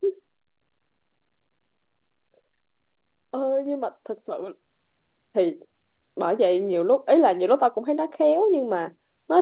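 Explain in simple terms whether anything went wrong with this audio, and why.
Microphone volume stepped up at 3.66, 4.68 and 8.37 seconds: the call software judged the microphone too quiet and raised its input level abruptly, so voice and background jump louder together. The call's phone-style codec keeps nothing above 4 kHz, giving the speech a narrow, telephone-like sound.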